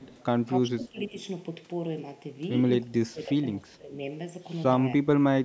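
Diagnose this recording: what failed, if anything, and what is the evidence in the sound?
Throughout, the speech sounds hollow and phasey, with a fixed notch around 1.5 kHz. A channel delay (comb filtering) at the wiring or driver stage, with one channel lagging by under half a millisecond before the mono sum, explains it.

From 0.0 to 0.25 s, a faint copy trails the speech by 299 ms, about 30 dB down. This is likely echo leak, which happens when the far end's echo canceller lets loudspeaker pickup through.

The speech dips and thins at 0.61–1.14 s, 2.84–3.44 s and 3.6–3.94 s, dropping by up to about 20 dB. The likely cause is speech suppressed in double talk by the call's echo canceller.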